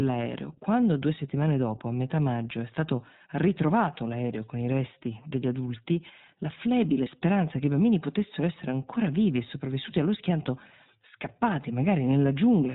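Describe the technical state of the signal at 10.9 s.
At 10.9 s the speech carries iLBC codec damage, as it does throughout the clip. Nothing above 4 kHz survives. Each 20 ms frame is coded on its own, leaving a plainly rough, synthetic texture. That fits iLBC's 15.2 kbps mode.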